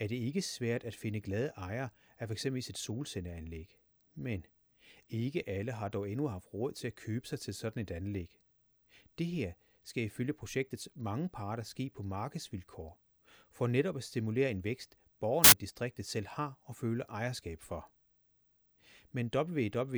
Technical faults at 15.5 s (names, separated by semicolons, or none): samples built from the wrong bytes